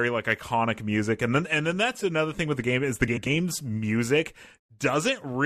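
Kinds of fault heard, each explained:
Frames out of order, 3.07 to 3.27 s: two adjacent blocks of audio, each about 93 ms long (which fits runs of four codec frames), were decoded in swapped order, so this short stretch of speech plays its second half before its first. It comes across as a brief garbled flutter. Nothing is dropped; the timing of the rest stays intact.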